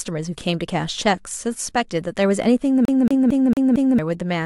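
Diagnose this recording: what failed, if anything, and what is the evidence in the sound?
From 2.85 s to 3.99 s the speech locks into a fast, even stutter: one 0.23 s slice repeats five times with a brief mute at each jump. That's a CD stuck on one turn at the playback stage, where a scratch throws the laser back a track every rotation.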